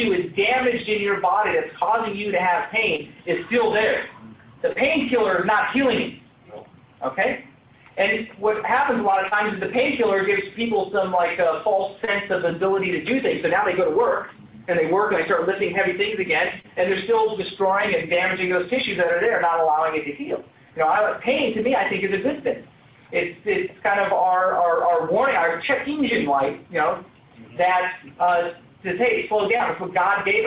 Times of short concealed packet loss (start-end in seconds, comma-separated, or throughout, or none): 2.96-3.01, 4.72-4.78, 9.28-9.34, 12.04-12.10, 16.60-16.66, 28.25-28.31, 29.57-29.62